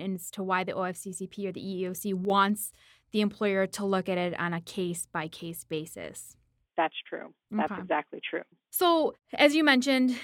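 At 2.25 s the stereo feed likely loses one of its two channels for about 50 ms, recovering at 2.3 s, a one channel drops out fault. Because the output is folded to mono, the speech common to both sides is suddenly summed from a single source, so its level falls abruptly by about 6 dB. Anything carried only on the missing side vanishes. The result is a brief, sharp dip in loudness, heard as a momentary drop in level.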